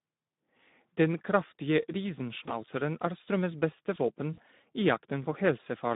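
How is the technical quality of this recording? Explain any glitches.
The technical quality is poor: the whole recording carries plainly audible low-bitrate codec damage, and two short concealed dropouts occur.

Speex codec, throughout: The speech sits in a narrow telephone band of about 150 Hz to 3.7 kHz and sounds hoarse and grainy, a plainly audible CELP artefact. It fits Speex running at around 11 kbps. At that rate the encoder has few bits to describe the excitation signal driving its vocal-tract filter. The missing detail comes back as noisy, rough texture rather than clean voicing.

VoIP packet loss concealed by the speech codec, at 2.45 to 2.56 s and 4.33 to 4.40 s: The first event follows about 20 ms of missing audio, and the second about 40 ms. In each case the decoder fills the gap by repeating its last pitch and filter settings at falling gain, so the sound smears into a buzzy tone or coloured noise that fades. 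Because each decoded frame depends on the previous one, the distortion persists a little after the audio resumes, which is why the first event extends to about 110 ms.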